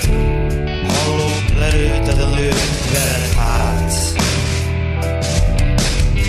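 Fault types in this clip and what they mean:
No technical faults can be heard anywhere in the audio.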